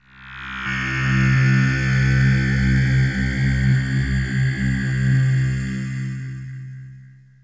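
A skip ahead occurs at 0.66 to 0.68 s. Roughly 0.4 s of audio was discarded while later audio was already queued, so playback jumps straight forward with no gap, the two sides butted together. The call path's band limit near 8 kHz fits a G.722 codec.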